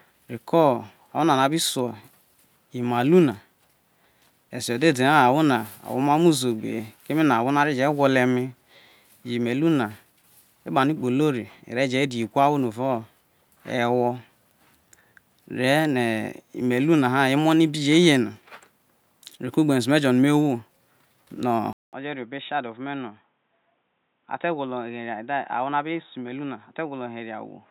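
At 21.73 s the speech stops for 200 ms, then returns duller and boxier, with nothing above 3.8 kHz, roughly 10 dB quieter, and with a new noise floor some 45 dB down. The input likely switched to a poorer device, which holds through to the end.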